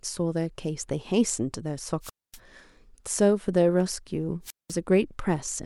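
This speech clip has two wireless microphone squelch dropouts. The first runs from 2.01 to 2.39 s, with a mute of about 0.24 s. The second runs from 4.43 to 4.75 s, with a mute of about 0.19 s. Each time, hiss briefly swells, then the sound falls into near silence. The voice then comes back. The radio link from an analogue FM microphone is fading, and the receiver's squelch cuts the output.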